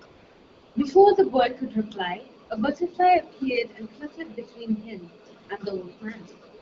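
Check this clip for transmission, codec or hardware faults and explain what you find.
The speech clip has one fault, AMR comfort noise, at 0.05 to 0.75 s, 2.45 to 2.49 s, 5.43 to 5.49 s and 6.57 to 6.61 s. Speech frames stopped and the receiver synthesised smooth, steady noise in place of the real background. On a spectrogram this appears as flat, featureless bands with abrupt edges, over light AMR-WB coding that fits about 12.65 kbit/s.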